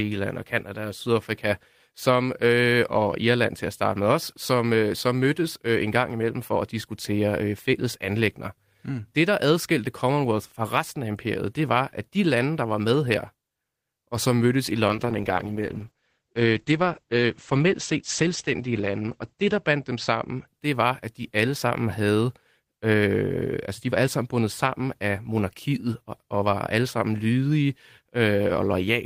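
From 14.9 to 20.53 s there is a call bitrate drop. The sound turns muffled and watery, which fits the encoder falling from about 32 kbps to 10 kbps, with audio bandwidth narrowing from 20 kHz to 8 kHz. The worst stretch lasts about 4.7 s before quality climbs back. Unlike packet loss, nothing drops out or stutters; the audio stays continuous but coarser, and the restored brightness afterward marks the recovery.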